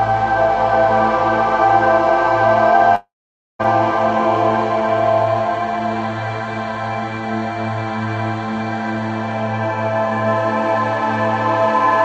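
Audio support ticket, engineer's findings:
Long network dropout, 2.95 to 3.61 s. Sound decays into fading buzz, then half a second of silence. About 0.64 s lost. Likely packet loss on the Opus call path.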